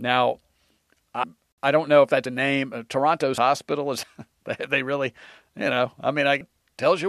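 Compressed frames are skipped at 1.23, 2.25, 3.37, 4.03 and 6.40 s. The speech jumps ahead by roughly 0.3, 0.3, 0.7, 0.1 and 0.3 s, consistent with whole 26 ms frames being dropped.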